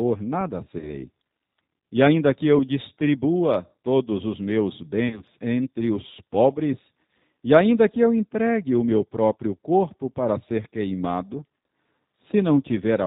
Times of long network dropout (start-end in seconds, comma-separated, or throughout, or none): none